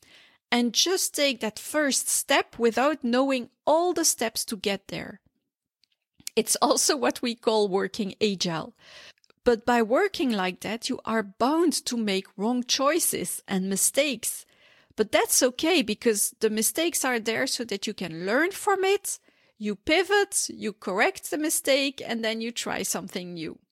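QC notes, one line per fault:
No faults found in this speech clip. Nothing here needs flagging.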